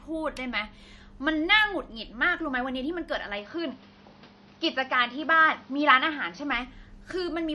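Speech with a plainly watery, swirly coloring and nothing above 11.9 kHz throughout, likely from MP3 compression at a low rate that fits roughly 48 kbps. From 3.38 to 6.53 s the sound turns dull and boxy, cut off above 6.1 kHz with faint new background noise well below the speech, with no gap at the switch and no level jump, likely from an input switched to a poorer device before the original character returns.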